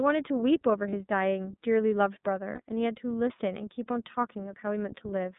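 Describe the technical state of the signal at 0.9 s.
At 0.9 s there is a lost iLBC frame, a dropout from 0.90 to 0.94 s spanning roughly one 30 ms frame. With the packet missing, the decoder fills the hole by repeating the last pitch cycle blended with noise, so the gap sounds like a brief held, slightly buzzy vowel rather than silence. Because each iLBC frame is coded independently, the following frame decodes cleanly and the speech recovers immediately. On a waveform this shows as a short run of near-identical repeated periods; on a spectrogram, a flat, smeared harmonic patch with a hazy noise floor.

The moment also sits inside the iLBC codec coloring of the whole clip. The band is confined to roughly 150 Hz to 3.7 kHz, so consonants lose their sparkle. The coding damage is plainly audible as a slightly rough, synthetic texture in the speech, consistent with the 13.33 kbps, 30 ms frame mode. 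A spectrogram shows a hard ceiling just under 4 kHz with nothing above it, and a thin low end below about 150 Hz.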